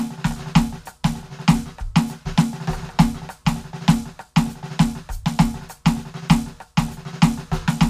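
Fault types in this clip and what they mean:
No technical fault can be heard anywhere in this music: the signal stays continuous throughout, with no dropouts, distortion or interference.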